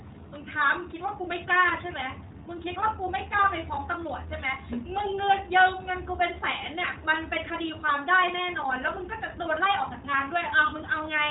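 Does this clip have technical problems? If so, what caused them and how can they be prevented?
Yes. The speech carries iLBC codec damage throughout: nothing above 4 kHz, with a plainly audible rough, synthetic texture. Each short frame's excitation is coded independently at low rate, which fits the 20 ms, 15.2 kbps mode. Prevent it by negotiating a wideband codec such as Opus.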